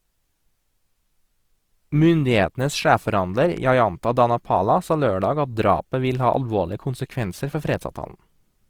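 From start to finish the speech has a grainy, rough texture, with tonal parts sounding noisy instead of clean. This is likely Opus compression in its music (CELT) mode, at a low rate that fits around 24 kbps, with bands the encoder couldn't afford filled by folded or noise content. A spectrogram would show the full bandwidth kept but blotchy, with smeared noise-like texture replacing fine harmonic detail.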